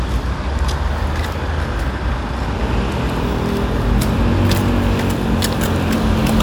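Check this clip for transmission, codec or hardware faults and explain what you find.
No faults were found.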